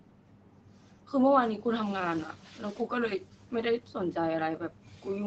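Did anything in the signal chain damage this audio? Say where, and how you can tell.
Yes. In the call processing stage, speech is intermittently swallowed from 0.00 to 1.13 s, 2.33 to 2.90 s, 3.19 to 3.53 s, 3.80 to 3.95 s and 4.57 to 5.06 s. Word edges and quiet stretches dip by about 11 to 13 dB. This is speech cut by the noise suppressor, which mistook low-level speech for background and attenuated both together.

From 1.85 s, right as the room noise jumps by about 16 dB near 2 s, the background noise comes through with less reduction. It then sinks over 1.37 s and settles around 3.22 s, about 8 dB lower. That is the noise suppressor catching up: its noise estimate lagged the sudden rise and only gradually adapted.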